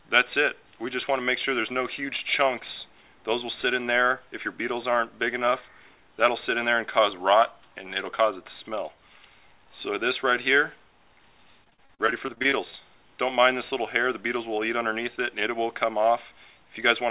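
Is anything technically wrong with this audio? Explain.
Yes. Repeated packet loss (robotic sound) runs from 11.64 to 12.81 s. Over that stretch, audio packets went missing again and again. The receiver patched each hole by stretching the last sound it had, and another hole followed soon after. More than a dozen short gaps, the longest about 39 ms, add up to roughly a third of a second lost, and concealment covers about 27% of the span. The sound turns choppy, with pieces missing, all within a band that stops at 4 kHz, which fits a narrowband call codec such as G.711.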